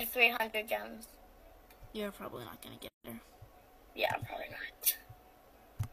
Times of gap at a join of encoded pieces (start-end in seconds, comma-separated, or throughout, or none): 2.89-3.04